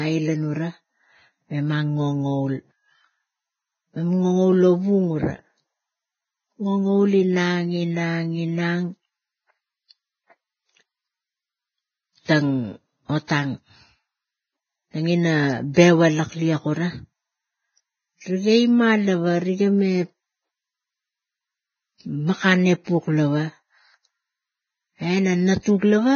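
From the start, the speech sounds hissy and grainy, with nothing above 6.5 kHz. Heavy Vorbis compression at about 14 kbps is the likely cause. The spectrogram shows a hard ceiling and mottled, speckled treble.

From 15.74 to 15.77 s, pre-echo appears as a short hiss about 26 ms before an attack, softening it. In the waveform, a thin noise smear leads the transient.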